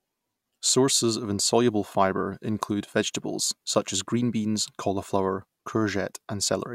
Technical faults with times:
none

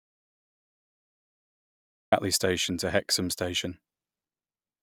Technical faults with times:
0.00-2.12 audio dropout to silence

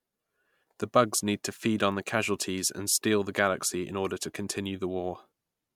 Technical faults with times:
none

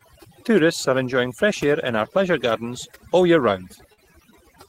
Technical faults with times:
0.00-4.68 overdone noise removal
3.93-3.99 short concealed packet loss

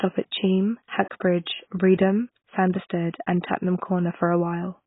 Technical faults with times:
0.00-4.87 AAC compression

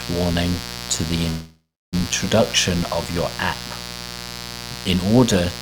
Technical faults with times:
0.00-5.61 mains buzz
1.29-1.95 call audio freeze

